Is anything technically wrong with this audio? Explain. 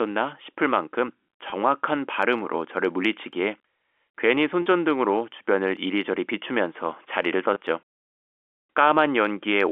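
Yes. Packet loss with pitch repetition occurs at 1.50 to 1.52 s, 4.62 to 4.66 s and 7.54 to 7.56 s. About 20, 40 and 20 ms of audio went missing. The receiver repeated the last pitch period to fill each gap. Each sounds like a brief held, buzzy note.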